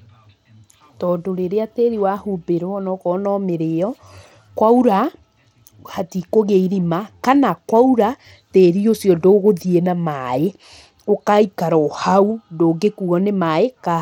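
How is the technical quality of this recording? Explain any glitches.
Pretty rough, honestly. From start to finish the speech has plainly audible Bluetooth SBC compression damage, likely from a starved bit pool, which fits a low rate around 96 kbps. The top sub-bands keep dropping out and flickering, and everything else carries a gritty, aliased edge.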